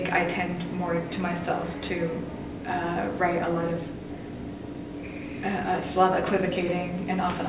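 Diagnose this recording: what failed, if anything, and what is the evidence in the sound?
Nothing failed: the sound gives no evidence of a fault at any stage.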